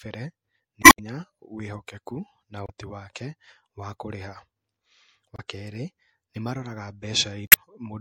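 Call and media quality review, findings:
Throughout: watery, swirly speech with dull top end and smeared consonants, likely MP3 compression at a low bitrate, which fits something around 64 kbps. Encoder starves for bits, cuts the treble and drops weak frequency lines frame to frame, hence the shimmer.

Damaged data in a compressed stream at 0.80–1.00 s, 2.65–2.70 s, 5.35–5.40 s and 7.47–7.56 s: short glitches. Corrupt bytes in the stream, so the decoder misreads frames, loses sync and hunts for the next header.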